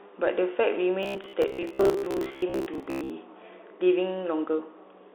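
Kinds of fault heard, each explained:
Bluetooth CVSD headset codec: The speech is squeezed into a phone-style band, with nothing above about 3.6 kHz, plus scratchy s sounds and a grainy hiss underneath.
Robotic sound from repeated short buffers: From 1.03 to 3.10 s the voice becomes a metallic 66.8 Hz buzz, likely from roughly 15 ms chunks replayed, with about half the audio repeated.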